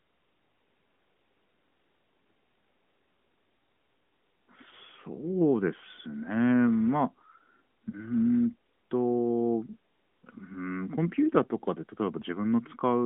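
At 7.90 to 7.98 s, a lost AMR speech frame: a quick dip or warble while the decoder fills a 20 ms gap from the last good frame.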